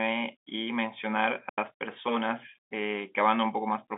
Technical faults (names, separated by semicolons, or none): digital wireless dropout